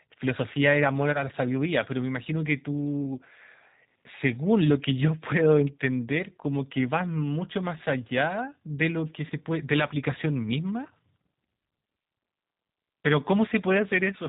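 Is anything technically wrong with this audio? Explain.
Yes, there are two technical problems with this speech recording.

The G.729 codec is audible throughout, and its character fits the 8 kbit/s G.729A variant. The codec rebuilds each 10 ms frame from a vocal tract filter, a pitch predictor and a few fixed pulses, rather than carrying the waveform itself. The result is plainly audible: the voice sounds rough and slightly synthetic, and nothing above 4 kHz survives, so the sound is band-limited and dull.

VoIP packet loss concealed by the speech codec occurs twice, at 1.13 to 1.19 s and at 9.28 to 9.32 s. Each gap fits a single lost 20 ms packet. The decoder filled the gap by extrapolating from its last pitch and filter settings while lowering the gain. Because each frame depends on the previous one, the disturbance lasts longer than the 20 ms of lost audio. It is heard as a short, fading buzzy or noisy smear where the voice turns weak and distorted before recovering.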